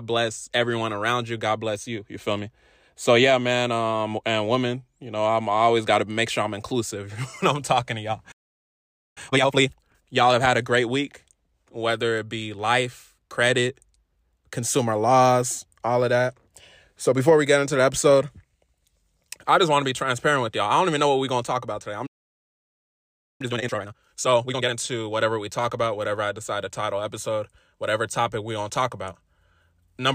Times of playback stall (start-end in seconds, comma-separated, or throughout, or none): 8.31-9.18, 22.06-23.41